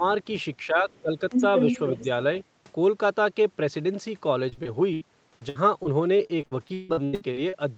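The voice dips by roughly 10 dB from 0.00 to 0.04 s and again from 0.67 to 1.21 s. This is likely speech suppressed in double talk, where the echo canceller turned down both sides while they overlapped.

A second voice leaks through faintly, about 35 dB below the speech, from 0.91 to 1.01 s, then at about equal level from 1.30 to 2.04 s. This is likely the other side's voice leaking through, with loudspeaker echo left in the microphone.

From 4.49 to 5.03 s and from 5.39 to 7.55 s, the sound turns choppy and robotic, with about 30% patched over and gaps up to 155 ms. This is repeated packet loss, with each hole filled by stretching the previous sound.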